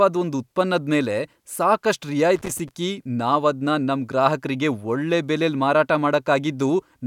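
At 2.36 s there's a burst of loose connector crackle running to about 2.71 s, roughly a third of a second. A worn or grubby contact is making and breaking as it shifts, chopping the speech and spitting out irregular scratchy pops.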